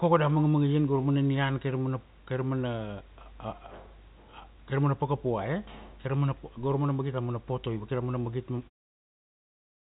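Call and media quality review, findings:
No faults found: band-limited at 4 kHz as expected for a G.711 narrowband call path, room noise about 38 dB below the speech, and a smooth fade-out from roughly 8.5 s to 8.7 s.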